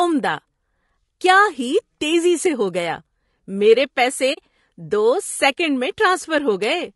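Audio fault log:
throughout: low-delay AAC compression, likely AAC-ELD near 32 kbps; short frames blur pitch harmonics, leaving speech rough and grainy, with noise between harmonics and a synthetic top band.
4.33–4.38 s: AAC frame loss with muting, after "میرے پیسے" and before "دو سیکنڈ میں"; a soft-edged 40 ms silence, consistent with two zeroed frames faded by overlapping windows.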